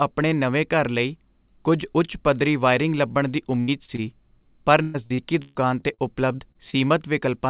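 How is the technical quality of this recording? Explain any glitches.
The recording has several packet-loss glitches clustered between about 3.6 and 6.7 s, heard through a narrowband phone-style path with nothing above 4 kHz, which fits G.711 mu-law at 64 kbps.

Burst of packet loss, 3.60 to 3.70 s, right after "ਪੱਧਰੀ ਵਾਇਰਿੰਗ ਲੱਭਣ ਦੀ": roughly 80 ms of audio never arrived in time. The receiver stretched the last sound to cover the hole, so you hear a brief held, fading tail before the speech picks up again with that chunk missing.

Short concealed packet loss at 3.86, 3.96, 6.36, 6.52 and 6.70 s: each is about 20 ms of lost audio that the decoder patched by extending the preceding sound and blending back in. Each shows up as a quick smear or wobble, and a short consonant can get swallowed.

Repeated packet loss (robotic sound), 4.82 to 6.00 s: six gaps hit this stretch, the longest about 125 ms, and roughly a third of it is filled-in audio. 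Patch follows patch so closely that the speech turns choppy, with bits missing.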